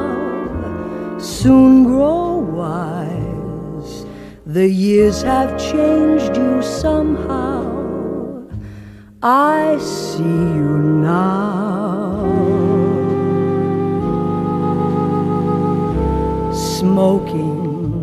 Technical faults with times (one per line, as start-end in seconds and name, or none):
3.58 compressed frames skipped
7.59 compressed frames skipped